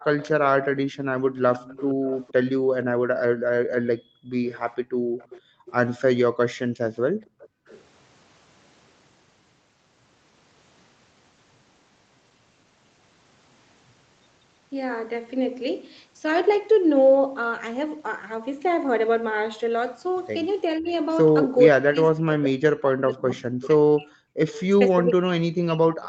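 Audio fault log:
0.17–2.33 s, 4.46–5.73 s, 7.25–7.82 s and 24.48–24.63 s, echo leak: a faint delayed copy of the speech trails the talker at about 470–490 ms. It sits roughly 20 dB below the direct speech in the first and last stretches, and fainter in the middle two, at around 25 and 30 dB down. The steady delay and low level point to the far end's loudspeaker being picked up by its microphone. The likely cause is that the echo canceller did not fully subtract that pickup, so the residue was sent back down the call.
2.96–5.66 s and 6.65–7.67 s, background gated by the echo canceller: the room sound dips, by about 37–38 dB at its deepest, then returns. Across the first span the drops add up to about a second and a half, and across the second to under a second. This is the canceller clamping the microphone hard while the loudspeaker is active, then releasing. Because the ambience vanishes and reappears, it sounds pumped.
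20.79–26.08 s, speech suppressed in double talk: from here to the end, the talker's speech is pushed down in pieces, dipping by around 40 dB at its worst and dropping partly out while the other side is also speaking. The likely cause is the echo canceller failing to tell the local talker from the loudspeaker echo during overlapping speech, so it attenuated both. The result is choppy, hollowed-out speech through the final stretch.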